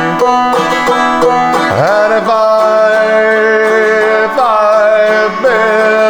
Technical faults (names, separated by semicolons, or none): none